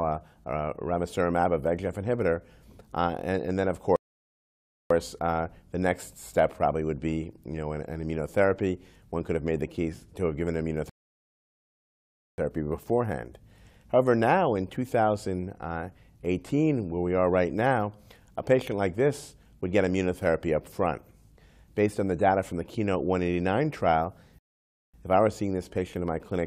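Rebuffering stalls occur at 3.96 s, 10.89 s and 24.39 s, lasting about 0.94, 1.49 and 0.55 s. Playback starves, goes silent, then resumes exactly where it stopped.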